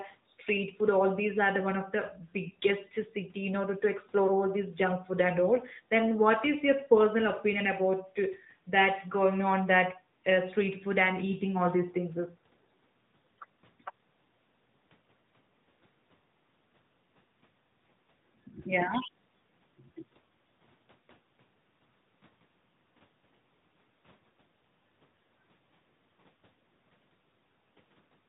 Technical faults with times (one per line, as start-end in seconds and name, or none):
0.00-28.29 AMR narrowband mobile codec